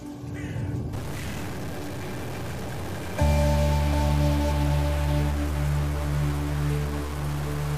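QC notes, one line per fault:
0.93–7.77 s, stuck bit: harsh buzz to the end, with noise around -30 dBFS filling quiet gaps, unlike clipping; likely one data bit held fixed.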